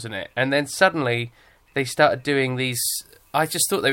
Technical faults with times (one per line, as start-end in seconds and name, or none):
2.72-3.93 pre-emphasis left on